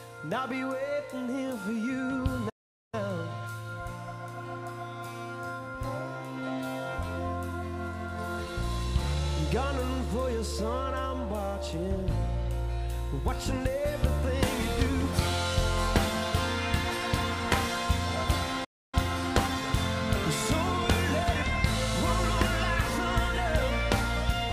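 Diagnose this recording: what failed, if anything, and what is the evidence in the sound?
Playback stalls at 2.49 to 2.94 s and again at 18.64 to 18.95 s, both at the playback stage. The sound halts in mid-flow and the output falls silent for about 0.43 s the first time and about 0.28 s the second, then resumes. The likely cause is the player starving for data or its output thread being blocked, so nothing reached the device until the buffer was refilled and playback recovered.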